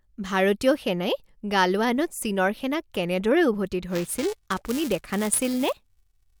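A speech clip with buffer tearing from 3.90 s to the end. The writing and reading positions in the playback ring buffer have drifted and now cross within each period. Every buffer carries a small sliver of audio from a few milliseconds earlier, with hard joins on both sides. The result is a steady robotic buzz near 375 Hz, which fits a 128-sample buffer. The buzz rides only on the speech, not the gaps between.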